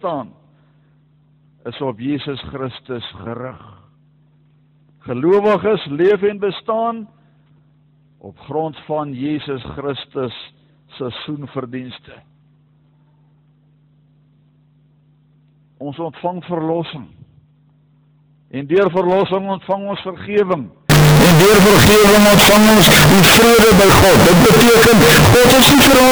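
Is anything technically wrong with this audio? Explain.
Yes. A float-read-as-integer fault takes over from 20.90 s to the end at 26.12 s. The signal suddenly becomes a harsh, very loud, almost square waveform sitting at an almost fixed, high level, with the background noise brought up to the same level as the main sound. The likely cause is 32-bit float samples being decoded as 32-bit integers, so each value's sign and exponent bits, rather than its true amplitude, decide the output level.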